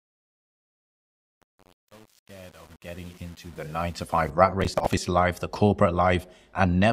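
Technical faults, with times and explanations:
0.0–4.30 s, truncation distortion on a fade: The fade passes through a gain stage that keeps only about 8 bits with no dither. Near the quiet end of the fade, the waveform collapses into a few coarse square steps, so the sound turns gritty. Unlike processor crackle, this grit tracks the level: it is worst where the sound is quietest.
4.60–4.97 s, processor overload crackle: After the fade, a short burst of crackle and tearing rides over the sound for about a third of a second. This is the processor falling behind and missing a long run of buffer deadlines, each of which is dropped outright, leaving a tiny hard-edged gap. The spacing fits buffers of around 10 ms and some thirty misses in a row. Unlike truncation grit, it does not depend on loudness and stops abruptly once the load passes.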